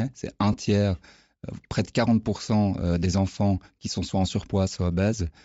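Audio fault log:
throughout: Bluetooth LC3 compression. The speech has a grainy, breathy top with hollow highs, likely from low-rate LC3 filling a zeroed upper spectrum with noise, which fits about 32 kbps.
0.53 s: lost LE Audio frames. There's a brief 10 ms smeared, noisy blip where the decoder reused the previous spectrum with scrambled signs, which fits a single dropped frame.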